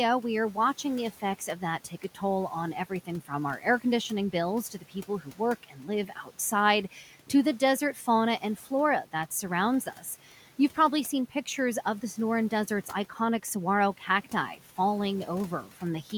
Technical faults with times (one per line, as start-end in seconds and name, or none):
1.20-2.22 speech cut by the noise suppressor
2.90-10.77 speech cut by the noise suppressor
13.10-14.78 speech cut by the noise suppressor
15.64-16.11 speech cut by the noise suppressor